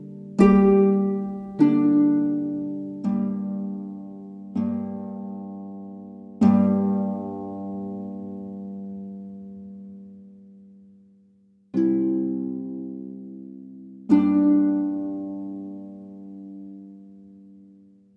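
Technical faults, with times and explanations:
No technical faults detected in this audio.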